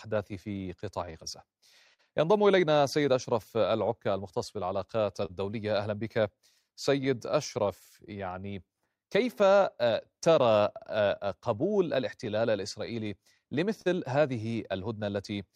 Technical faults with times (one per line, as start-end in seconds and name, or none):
0.00-15.56 clock drift between sender and receiver
0.08-15.36 repeated timing corrections
0.85-3.05 scattered short gaps
5.25-5.31 short stall from a late packet
12.25-13.88 scattered short gaps